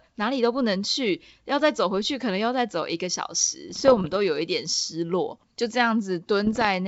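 Speech carried over a G.722 wideband link at 64 kbit/s has bit errors on an ADPCM link from 3.70 to 4.16 s and from 6.46 to 6.67 s, heard as pops and rough, level-jumping bursts. Unlike packet loss, nothing drops out: each corrupted bit, at an error rate of a fraction of a percent, knocks the decoder's step size and prediction off, so the roughness rings on for a few milliseconds.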